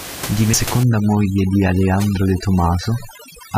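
At 0.53 s the laser jumped to another turn of the disc's spiral, a CD skip: the player mutes only very briefly and resumes from a different point, so the speech ticks and jumps abruptly forward or back. From 0.83 s to the end, a noise reduction stage set far too strong cuts frequency bands down or out whenever they sit near its noise estimate. This is overdone noise removal: the room noise, about 12 dB below the speech, drops and breaks up into twinkling specks, and the voice's quieter components vanish with it.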